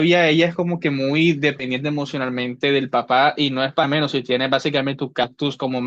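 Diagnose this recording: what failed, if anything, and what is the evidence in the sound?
Compressed frames skipped, at the codec decoding stage. At 1.59 s the speech jumps ahead by about one frame. At 5.23 s it jumps roughly three frames. Frames are 20 ms long.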